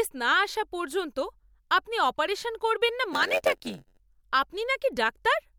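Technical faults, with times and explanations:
3.12–4.00 s, block size mismatch (padded): right after "আপনি অপারেশন করবেন না" a steady buzz at about 92 Hz appears. One stage hands over shorter blocks than the next expects, and zeros fill the gap each time, so the speech stretches to 0.919 speed.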